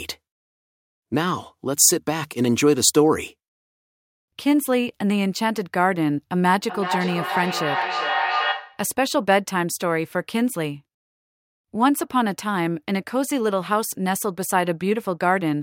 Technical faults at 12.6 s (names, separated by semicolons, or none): none